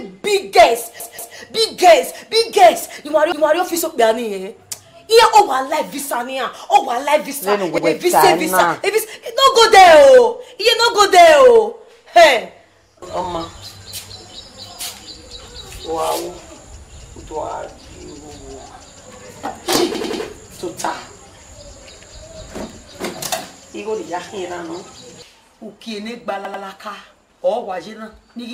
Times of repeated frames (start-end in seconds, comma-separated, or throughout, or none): 1.00-1.37, 3.32-3.60, 7.78-7.87, 19.95-20.23, 26.45-26.64